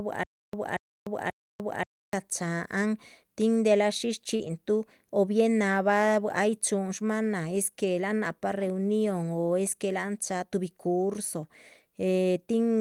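From the very start until 2.13 s, one short burst of speech, about 0.23 s long, keeps returning every 0.53 s with roughly 0.30 s of dead digital silence between repeats. This is a stutter with silent gaps, most likely a stalled stream replaying its last fragment on each retry, so the real audio for that stretch is lost.

Just after "tin delah shísh", from 4.35 s to 4.41 s, there is a brief smear where 40 ms of sound went missing. This is short concealed packet loss: the decoder never received that audio in time and covered the hole by extending the preceding sound before blending back.

Overlapping and following that, from 4.39 s to 4.49 s, 60 ms sound rougher and noisier, which fits about three lost packets rebuilt from error correction. The decoder played the low-bitrate copies carried in later packets, so there is no gap, only degraded texture. The same roughness returns for 20 ms at 7.55 s, just after "ay chúhun shmáhan nah", where a single packet was rebuilt the same way.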